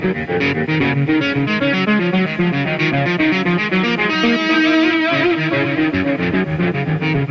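No technical faults are audible anywhere in this audio.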